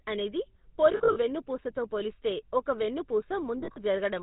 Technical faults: GSM full-rate codec; lost GSM frames

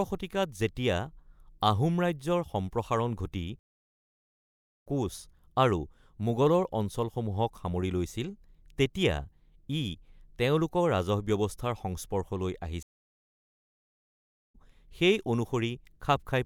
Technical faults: stream reconnect

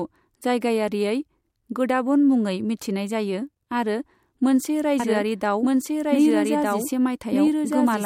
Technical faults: doubled audio track

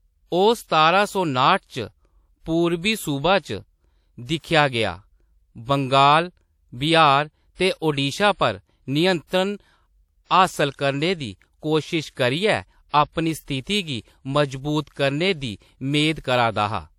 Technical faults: pre-echo

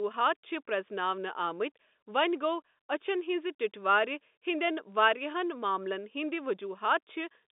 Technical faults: none

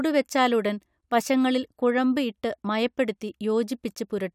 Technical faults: none

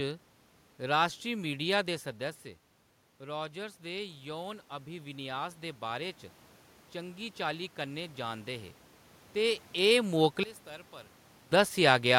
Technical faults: automatic gain rising; one channel inverted

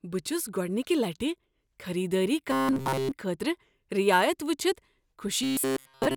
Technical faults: robotic sound from repeated short buffers

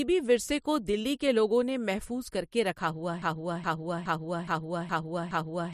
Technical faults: broken-record loop

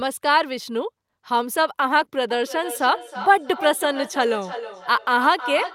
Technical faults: feedback echo between two devices

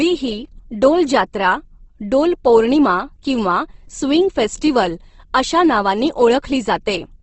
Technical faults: Opus compression

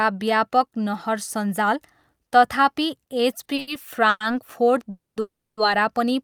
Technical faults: short stall from a late packet; call audio freeze

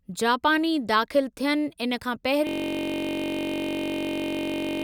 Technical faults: system hang loop

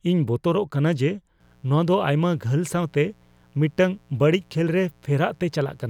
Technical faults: mains buzz

